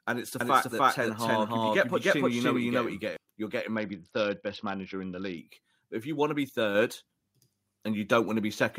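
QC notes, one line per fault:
0.41–3.17 s, doubled audio track: just after "it's the", a full-band second copy of the speech runs about a third of a second behind at roughly the same level, dry and without room colour, cutting in and out abruptly. Unlike a reverb tail or slapback echo, it never decays, which points to a likely second capture path or misaligned edit.
3.76–5.38 s, Bluetooth SBC bit pool drop: the treble dulls and a gritty quantisation noise rises as the codec falls from a bit pool of 31 to 7, around 61 kbps, starving the top sub-bands. It differs from a plain low-pass because the grit sits on the remaining band, and both clear when the rate recovers.
6.75 s, microphone volume stepped up: after "you want to be", speech and background noise jump together by about 4 dB in one instant step, as the input volume is raised. A compressor or AGC would ride the level smoothly and pump with the speech, not shift everything at once.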